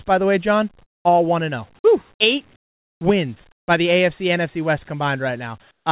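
Discontinuous transmission likely halted the sender during pauses, so comfort noise in place of the background fills 0.83–1.05 s (before "all one and zero"), 2.56–3.01, 3.52–3.68 and 5.71–5.86 s. It is flat, featureless hiss, about 5, 12, 6 and 10 dB quieter, and, like everything here, nothing above 4 kHz.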